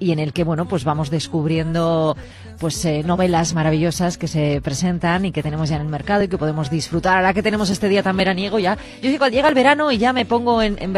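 Overlap between stream segments at 2.23–2.27 s is the first of a regular series, recurring at 4.22–4.26 s, 6.21–6.25 s, 8.20–8.24 s and 10.19–10.23 s, once every 2 seconds at each segment boundary. Each time, the timestamps of adjacent segments claim the same stretch, so the player discards roughly 35 to 43 ms of sound that was never actually duplicated. The waveform leaps across the missing piece, heard as a small click or skip with a steady two-second rhythm.

Block of digital silence appears at 3.52 s and again at 7.72 s, each a 5.8 ms run of zeros, which fits a 256-sample block left unfilled when the output buffer wasn't written in time. A shorter one follows at 9.49 s, about 3.5 ms. The sound drops straight out and returns without any fade, so each hole is heard as a tick or dip where the abrupt edges meet.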